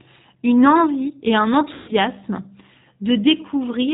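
The speech runs through the G.729 codec end to end, most likely the G.729A variant at 8 kbit/s. The decoder rebuilds each 10 ms frame from a vocal-tract filter, a pitch predictor and a handful of pulses, and passes nothing above 4 kHz. The result is a plainly audible coding sound: a dull, band-limited voice with a rough, slightly synthetic edge.

From 1.74 to 1.93 s comes VoIP packet loss concealed by the speech codec. About 140 ms of audio never arrived, which points to several consecutive packets dropping out. With no new data, the decoder keeps repeating its last pitch and filter while turning the gain down frame by frame. The voice smears into a fading buzzy tone or coloured noise. Because each frame depends on the one before, it sounds weak and distorted for a moment after the packets return.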